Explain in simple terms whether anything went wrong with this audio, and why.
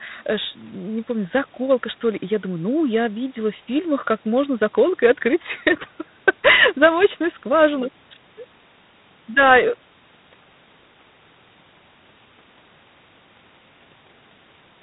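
Something did go wrong, from start to finish. The sound passed through G.726 ADPCM, a phone codec that stores only rough guesses of each change in the signal. Here it was squeezed hard, so a harsh, rasping hiss rises and falls with the speech. Everything above 4 kHz is gone, making it sound muffled.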